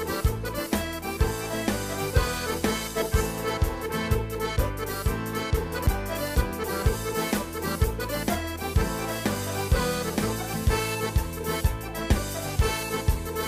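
A CD skip occurs at 5.87 s: a very brief mute of a few milliseconds, after which the audio continues from a different point on the disc's spiral. That jump in position, rather than a plain gap or click, distinguishes it from a simple dropout.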